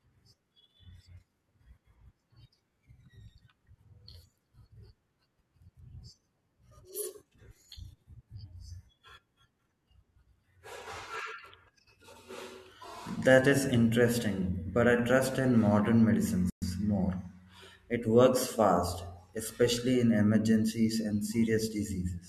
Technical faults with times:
16.50-16.62 playback stall

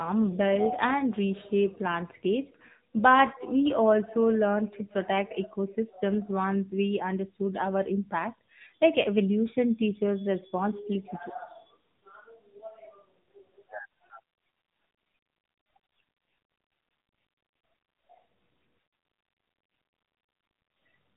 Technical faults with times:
0.00-21.17 AMR narrowband mobile codec

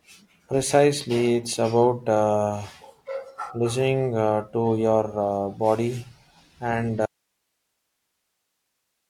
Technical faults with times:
7.06-9.10 audio dropout to a faint residue

